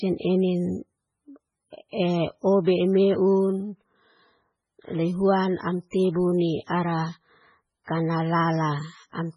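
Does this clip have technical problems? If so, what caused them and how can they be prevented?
Yes. Throughout the speech, nothing is heard above 10.5 kHz, and the sound is watery and swirly, with chirpy s sounds and smeared onsets. This is likely MP3 compression, heavy enough to suggest a starved bitrate around 16 kbps. Unlike a plain low-pass filter, which only dulls treble, the encoder drops weak frequency lines that flicker between frames, causing the swirl. Encoding at a higher bitrate, or keeping a lossless master, prevents it.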